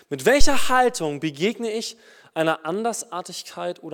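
At 0.41 s a deep thump peaks at about -3 dBFS and dies away over roughly 105 ms, clearing by 0.88 s, just before "begegne ich einer". It is a phantom power thump: supply voltage switched on or off on a live input, its step passing through the coupling capacitors.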